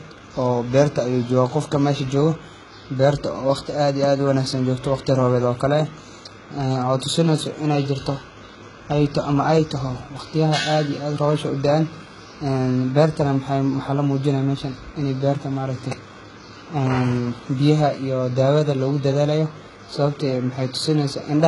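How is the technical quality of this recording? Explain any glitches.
The recording has one fault running through all of it: low-bitrate audio saved at a high bitrate. The speech has nothing at all above 11.1 kHz, so it sounds dull despite the generous file format. The likely cause is that a very low-bitrate encoding, in the range of HE-AAC at around 12 kbit/s, was later re-encoded as a high-bitrate MP3, around 256 kbit/s. The second pass kept the losses of the first. A spectrogram would show a flat, hard ceiling at 11.1 kHz with empty space above it for the whole clip.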